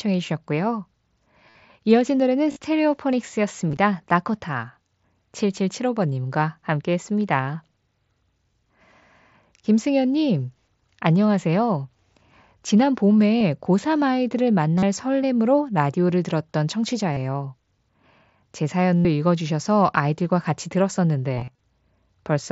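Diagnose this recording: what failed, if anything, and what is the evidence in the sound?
Brief buzzy tones hold at full level at 1.50, 2.52, 3.69, 13.39, 14.78, 17.13, 18.98 and 21.35 s, lasting 23 to 158 ms, each ending in a slight warble. This is concealed Bluetooth headset packet loss: the phone bridges missing packets by repeating the best-matching recent waveform.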